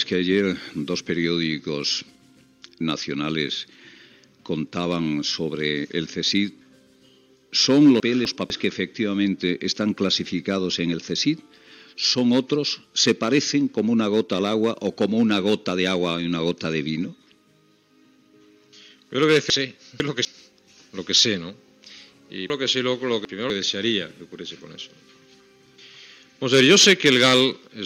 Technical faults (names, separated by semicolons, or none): chunks out of order